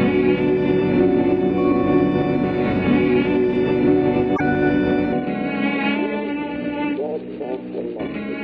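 Music, with one fault: from 4.35 to 4.41 s it jumps forward through a brief garbled glitch, likely a broken MP3 bit reservoir after dropped 26.1 ms frames.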